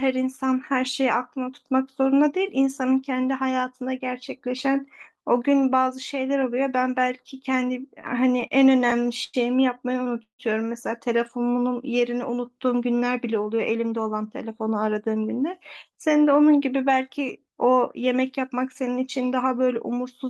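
A speech recording with three timing faults. From 8.01 to 9.35 s it drags and stutters through eleven brief holds, the longest 97 ms, as late packets repeatedly emptied the jitter buffer (repeated stalls, or stutter). At 10.23 to 10.41 s the sound hangs for about 157 ms, fading to silence for its last 110 ms before resuming intact, likely a call audio freeze from packets held up in transit. Between 12.65 and 13.93 s the speech sounds hurried at unchanged pitch, running at 110% speed as a jitter buffer speed-up trims roughly 150 ms of pitch periods to cut the excess delay.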